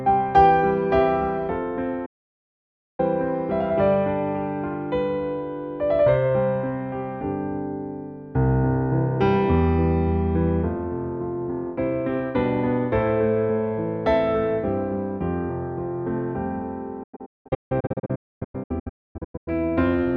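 At 2.06 s the sound fades to silence within about 8 ms and stays muted until 3.00 s, a gap of roughly 0.93 s. From 17.03 to 19.48 s it breaks into a series of short holes, the longest about 256 ms, together removing about 1.6 s. Both are digital broadcast dropouts: the receiver stopped getting valid frames and muted until clean ones returned, so the material sent during those gaps is gone.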